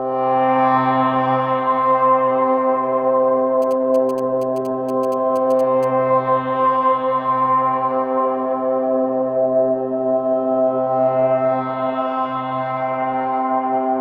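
A recording of everyday sounds, interrupted from 3.62 to 5.85 s by GSM signalling bursts: a galloping dit-dit-dit of short 216.7 Hz buzzes about 25 dB below the sound, rectified from a nearby 2G phone. Unlike steady mains hum or an active-call buzz, it arrives in broken groups.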